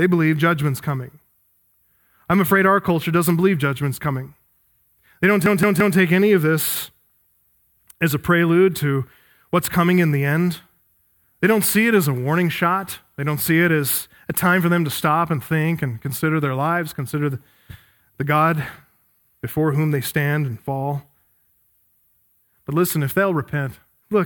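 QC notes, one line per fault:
5.46 to 5.97 s, repeated buffer: a chunk of about 170 ms of speech plays four times in a row with a hard join at each restart, so it stutters. Fresh audio didn't arrive in time, which fits an 8192-sample buffer. Nothing seems lost.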